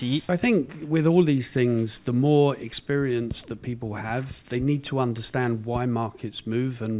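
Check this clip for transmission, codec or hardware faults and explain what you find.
No fault can be heard anywhere in the clip. Nothing in the audio needs flagging.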